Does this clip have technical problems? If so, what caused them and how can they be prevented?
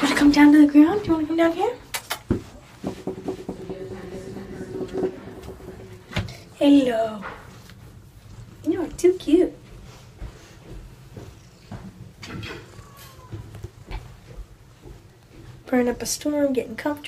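Yes. From 3.25 s to 5.09 s there's a doubled audio track: a second full-band copy of the sound trails the original by roughly 400 ms, around 5 dB quieter, with no decay or room colour, and it cuts in and out abruptly. The likely cause is the same signal being captured again through a slower path, or an edit leaving two misaligned copies. To prevent it, route each source through a single capture path and check edits for stacked duplicate regions.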